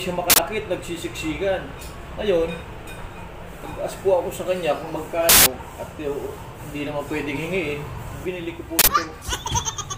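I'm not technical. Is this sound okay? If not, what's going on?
No. Three sudden, harsh bursts of digital noise cut in, at 0.30, 5.29 and 8.79 seconds. Each is an uninitialised buffer. The player sent out a chunk of memory before any sound was written into it, so leftover data played as noise. The middle burst lasts 0.17 seconds, twice as long as the others.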